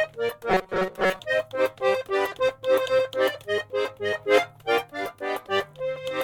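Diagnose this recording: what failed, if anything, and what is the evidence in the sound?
From 0.50 to 1.20 s the music collapses into a stiff metallic drone pinned at 188 Hz: robotic sound from repeated short buffers. That's likely a starved driver buffer looping a chunk of about 5.3 ms while most of the fresh audio gets skipped.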